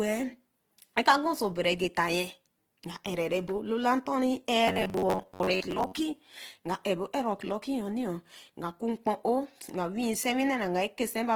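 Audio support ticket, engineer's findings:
Opus compression, whole clip: speech grainy and rough, codec damage plainly audible. Likely Opus at 16 kbps in CELT mode, filling starved bands with folded or noise-like content.

Robotic sound from repeated short buffers, 4.68–5.92 s: rigid metallic buzz at 93.8 Hz. Likely about 10.7 ms blocks looped in place of skipped audio, roughly half the stretch repeated.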